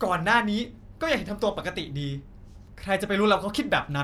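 Nothing in this bit of speech points to a technical fault, so there's nothing to flag here.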